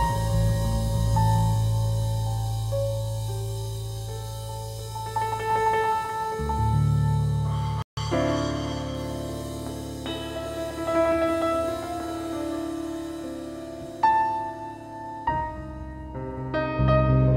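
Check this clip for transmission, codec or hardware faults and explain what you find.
One fault stands out. From 7.82 to 7.97 s the sound drops abruptly to about 150 ms of silence, then resumes. This is likely a Bluetooth stall: interference delayed packets, the headphones' buffer emptied, and playback halted until retransmitted data arrived.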